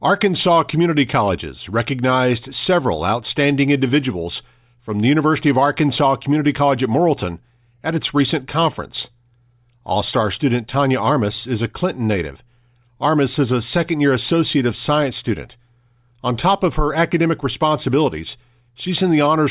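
No technical faults can be heard anywhere in the speech recording.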